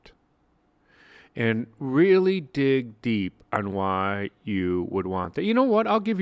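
No technical faults are audible.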